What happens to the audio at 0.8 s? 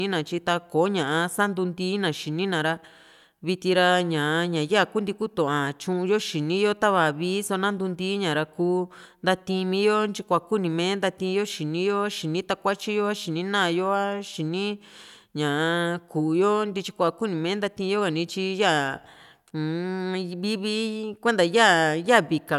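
Nothing goes wrong at 0.8 s; the audio plays through that moment intact, with no dropout, click, distortion or other fault.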